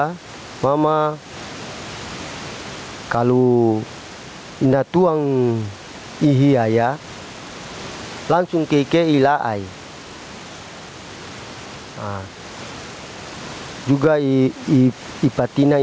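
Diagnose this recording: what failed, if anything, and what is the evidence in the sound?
Gain pumping runs throughout, with the level swinging by roughly 15 dB. The likely cause is input gain set far too high, with a fast limiter in call processing clamping each peak and squashing the dynamics.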